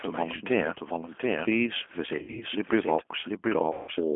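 The clip is a speech recording carried over a narrowband VoIP line. A second copy of the whole recording runs throughout, trailing roughly 0.7 s behind the first and about 5 dB quieter. This is a doubled audio track, likely from the signal being captured again through a slower path or from two out-of-step copies left in an edit. The late copy is as dry and full-band as the original, with no reverberant tail or room colour, so it reads as a distinct repeat rather than an echo. On a waveform, every onset reappears as a fainter twin at a fixed spacing. The whole line shows G.729 codec damage, clearly audible as a rough, slightly synthetic texture that fits 8 kbit/s G.729A coding. Content sits only between about 250 Hz and 3.4 kHz, so a spectrogram shows an empty band above 3.4 kHz and a thin low end, with smeared, grainy harmonics. VoIP packet loss concealed by the speech codec breaks in at 2.19–2.44 s and again at 3.73–3.91 s. 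At these points the decoder extends its last pitch and filter state, producing a stretched, fading sound followed by weakened speech as it recovers. The first event sounds like about 140 ms of missing audio spread over 220 ms, with the longest gap near 60 ms. The second sounds like about 150 ms missing. On a spectrogram, each event shows as a stretched segment decaying in level instead of normal formant movement.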